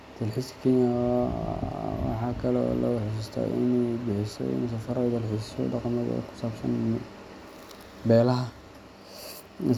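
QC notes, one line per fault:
No faults turned up on this one, and the speech comes through without anything to flag.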